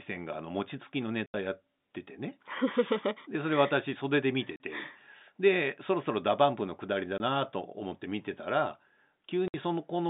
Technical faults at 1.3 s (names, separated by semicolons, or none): packet loss filled with silence